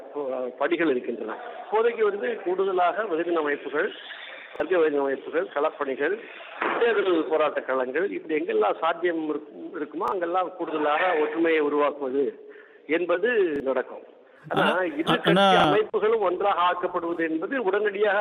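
Short stutters interrupt the sound at 4.56, 10.08, 13.56 and 15.6 seconds. At each one, a 40 ms fragment plays twice in a row with an abrupt seam where the copy begins. This is a repeated buffer. Fresh audio failed to reach the output in time, so the device replayed the block it already held. The repeat length fits a buffer of about 40 ms, and roughly that much new audio is skipped at each stutter.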